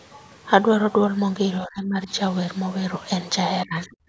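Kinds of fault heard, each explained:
Speech suppressed in double talk: The voice sinks sharply, around 20 dB at its deepest, between 1.61 and 2.1 s and again between 3.66 and 3.97 s, likely because the echo canceller heard both sides at once and turned the talker down with the echo.
Other side's voice leaking through: A brief, faint scrap of a second voice, roughly 25 dB below the talker, slips in at about 3.83 to 3.87 s, likely loudspeaker sound the echo canceller failed to remove fully from the microphone during that same overlap.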